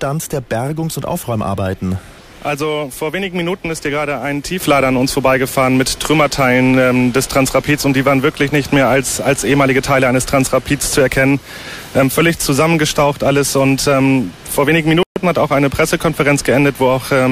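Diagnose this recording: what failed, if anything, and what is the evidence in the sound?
At 4.6 s the level steps up by about 6 dB in a single instant and stays there to the end, with the background noise rising by the same amount. This is likely a sudden gain jump in the driver or processing stage, where a new gain was applied without a ramp.

At 15.03 s the audio drops to silence for 131 ms and resumes at 15.16 s. The playback stage points to a Bluetooth stall: delayed radio packets left the headphone buffer empty until retransmitted data arrived.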